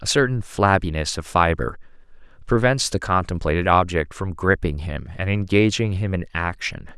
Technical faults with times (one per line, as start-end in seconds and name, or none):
none